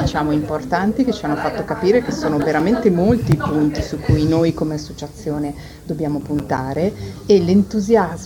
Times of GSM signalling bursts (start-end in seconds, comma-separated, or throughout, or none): none